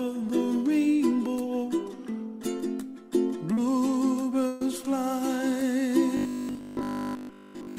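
Three network faults affect this audio. At 3.53 to 3.58 s there is short concealed packet loss. About 40 ms never arrived in time. The receiver extended the last sound for 35 ms and blended back. The result is a brief smear. At 4.47 to 4.62 s comes a burst of packet loss. About 140 ms is gone. The decoder stretched the preceding sound across 137 ms while turning it down, with no silent gap. It becomes a held, fading tail, and the audio resumes further on. From 6.17 s to the end, the sound turns into a rigid, metallic buzz at 50 Hz. The buzz persists throughout this final stretch. The likely cause is robotic sound from repeated short buffers. Audio arriving too seldom is padded by looping the last 20 ms, which imposes that fixed pitch.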